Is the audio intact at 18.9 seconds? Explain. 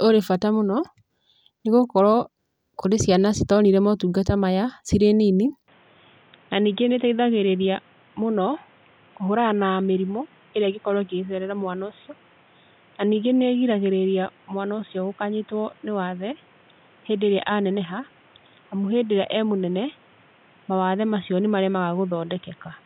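No. From 5.68 s, just after "motungata maya cirĩ nini", the input likely switched to a poorer device: the speech is boxier, cut above 3.8 kHz, somewhat quieter, with new background noise.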